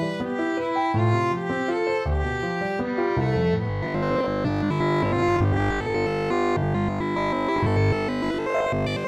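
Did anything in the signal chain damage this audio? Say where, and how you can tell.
Yes. Robotic sound from repeated short buffers, 3.70 to 9.06 s. A rigid 50 Hz buzz covers most of it. Likely a driver underrun repeating 20 ms slices.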